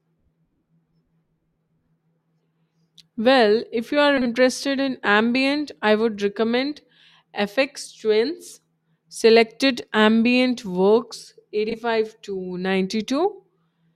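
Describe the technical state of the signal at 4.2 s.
Frames out of order from 4.17 to 4.27 s: two neighbouring 40 ms blocks play swapped, producing a brief garbled flutter, without losing time.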